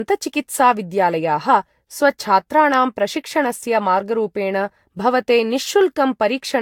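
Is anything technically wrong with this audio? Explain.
Yes. Generation loss runs throughout the speech. The sound suggests it was likely decoded and re-encoded with a lossy codec about four times, each pass re-quantising on a shifted frame grid, so quantisation noise and spectral holes pile up. The character fits repeated Vorbis passes near 69 kbit/s. The result is swirly, smeared and hollow beyond what that bitrate alone would give, consonant attacks blur, and nothing remains above 19.3 kHz.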